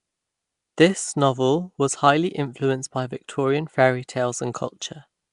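From start to finish, the speech carries a rough, hissy halo and a smeared, underwater quality, and there's nothing above about 10.6 kHz. That's the signature of Nellymoser compression, likely from the old Flash microphone codec at a rate around 44 kbps. It spends a fixed, small bit budget on short blocks, so weaker bands get no bits at all and are filled in with noise, which is the grainy fizz you hear riding on everything.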